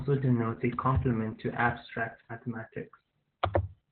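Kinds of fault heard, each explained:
Opus voice compression: The speech runs through a heavily squeezed speech coder for the whole clip. Nothing sounds above about 4.4 kHz, giving a narrowband, telephone-like dullness. The voice is also hoarse and faintly robotic, because the linear-prediction coder renders the excitation coarsely, which fits a rate near 8 kbps. A plain low-pass filter would muffle the sound just as much but would leave the remaining band clean, without this grainy, synthetic texture.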